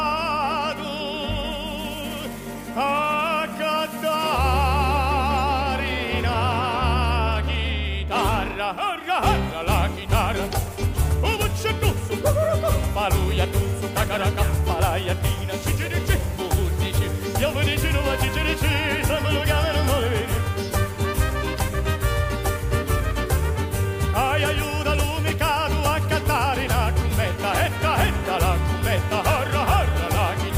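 From 15.49 s to 18.58 s the audio drops to low bit depth with dither, a resolution that fits about 7 bits. Random dither is added before rounding, so the quantisation error becomes a steady, even hiss sitting roughly 25 dB below the signal. This sets it apart from undithered truncation, whose error tracks the signal and sounds gritty or distorted, especially on quiet tails. Here the hiss stays constant and carries no distortion.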